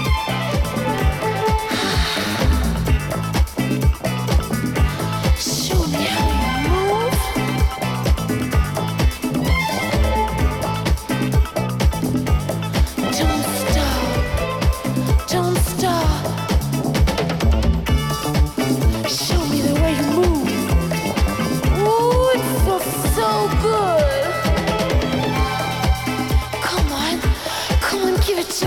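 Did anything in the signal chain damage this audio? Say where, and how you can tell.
Yes. A loud pop, two sharp pulses between 7.36 and 7.58 s, peaks about 5 dB above the sound, which carries on underneath. The cause is likely a voltage step in the analogue wiring, from a plug or switch. Unlike a dropout, nothing is missing.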